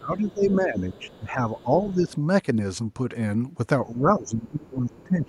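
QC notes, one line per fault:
0.0–1.43 s, 1.63–2.14 s, 3.86 s to the end: speech suppressed in double talk. The echo canceller likely mistook simultaneous talk for echo and turned the near talker down, so the speech dips by about 15, 10 and 20 dB respectively and thins out in stretches.
0.29–0.33 s, 0.79–1.17 s, 1.58–1.63 s: other side's voice leaking through. Residual loudspeaker echo was likely not fully cancelled at the microphone, so faint scraps of a second voice surface about 25 to 30 dB below the speech, brief except the longer middle stretch.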